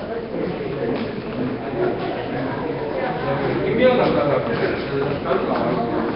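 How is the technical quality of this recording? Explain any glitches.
The technical quality is poor. Nellymoser compression runs through the whole recording. The sound is most likely coded with the Nellymoser Asao codec, which fits a low bitrate around 22 kbps. Fixed two-bit blocks leave weak bands empty and refilled with noise, giving a hissy, smeared, underwater halo with nothing above 5.3 kHz, which sets it apart from a simple low-pass filter.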